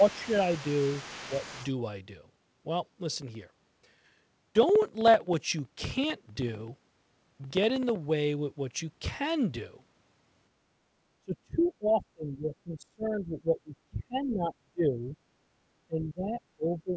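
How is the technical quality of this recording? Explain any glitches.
The recording has clear echo-canceller and driver problems: repeated speech suppression during overlapping talk, a faint second voice, regular ticks, and a brief background dip. The audio stops at 8 kHz, which fits a G.722 call path at 64 kbps.

Speech suppressed in double talk occurs at 0.00–0.29 s and 1.25–1.32 s (dips of about 10 dB), 11.19–15.17 s (about 30 dB), and 15.87 s to the end (about 20 dB). The talker's level sinks and thins in patches. The likely cause is the echo canceller attenuating the near talker while the far side also spoke.

The other side's voice leaks through from 0.00 to 1.74 s, about 20 dB below the main speech. It sounds like a faint second voice underneath. This is likely loudspeaker playback that the echo canceller did not fully subtract from the microphone signal.

Periodic USB or driver dropouts run from 3.16 to 7.96 s. 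A gap of about 2 ms of silence occurs every 64 ms, roughly seventy in all. They sound like an even ticking under the signal, consistent with a background task stalling the audio driver at a fixed interval.

Background gated by the echo canceller occurs at 10.81–10.91 s. The room tone drops by about 13 dB for roughly 100 ms, then returns. This is the canceller clamping the microphone while the loudspeaker was active, so the ambience briefly dips.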